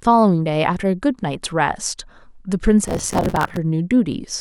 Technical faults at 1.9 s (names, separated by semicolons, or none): none